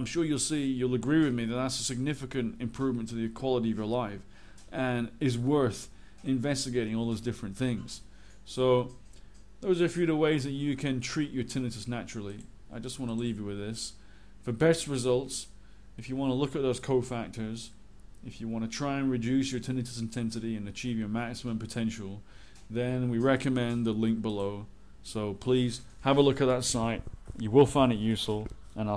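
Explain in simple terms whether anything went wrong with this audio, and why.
Nothing went wrong with this audio, because no fault can be heard anywhere in it.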